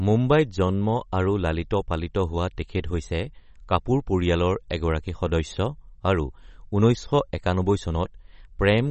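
From start to finish the speech carries plainly audible damage of the kind MP3 compression leaves, likely from an encoder short of bits, which fits a bitrate around 32 kbps. Nothing survives above 8.3 kHz, so s sounds lose their edge, and the treble that remains has a watery, swirly quality as weak frequency lines drop in and out between frames. On a spectrogram this appears as a flat ceiling at 8.3 kHz with patchy, flickering blocks beneath it.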